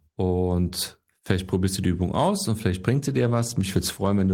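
From 2.96 s, after "aus und vielleicht", the speech turns rough and muffled. This is a call bitrate drop that forces coarser encoding, fitting a fall from 32 to 17 kbps.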